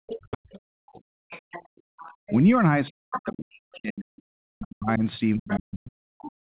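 A speech recording from a call, where the talker's own voice is repeatedly pulled down while a second voice runs underneath it. From 0.0 to 1.14 s, and again from 2.43 to 6.53 s, the talker is ducked hard, by as much as about 40 dB, for roughly a second in the first stretch and about three seconds in the second. This is speech suppressed in double talk, most likely because both sides spoke at once and the echo canceller, unable to separate them, turned everything down. What sets it apart from gating of the background is that the talker's speech itself drops while the other voice is present, rather than only the room tone falling away. That other side's voice is leaking through from 0.07 s to the end of the clip at 6.57 s, sitting about 10 dB below the talker. A second talker like this, rather than an echo trailing the talker's own sound, points to loudspeaker pickup the canceller did not fully remove. 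Between 1.73 and 1.99 s the background is gated by the echo canceller. The room sound drops by about 40 dB for around a fifth of a second and then returns. This is a brief hard cut of the ambience while the loudspeaker plays, not the longer, speech-shaped dips of double-talk suppression. The band stops at 4 kHz, which fits narrowband telephone coding.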